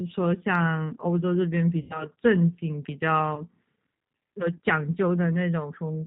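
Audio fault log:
Throughout: G.729 codec. The whole thing has that narrowband, slightly rough, synthetic edge, with nothing above 4 kHz. Speech is rebuilt from a vocal tract filter, pitch predictor and a few pulses per frame, and that fits an 8 kbit/s G.729A stream.
1.81–2.07 s and 3.35–3.44 s: VoIP packet loss concealed by the speech codec. About 90 ms goes missing in the first gap and about 20 ms in the second. The decoder fills each gap by stretching its last pitch and filter into a buzzy tone or coloured noise that fades. Because each frame builds on the one before, the speech sounds weak or distorted for a moment after each gap.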